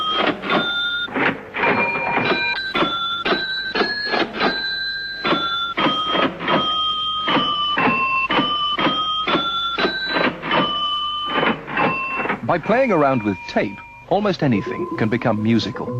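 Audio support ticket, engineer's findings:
Call bitrate drop, 2.55 to 4.59 s. Symptom: sound goes coarse and watery and loses its top end for roughly 2 s, then clears. Probable component: sender-side Opus encoder responding to a fallen bandwidth estimate. Mechanism: target rate cut, consistent with a fall from about 48 kbps to around 18 kbps. Fewer bits mean coarser quantisation and a narrower coded band. Full quality returns once the estimate recovers.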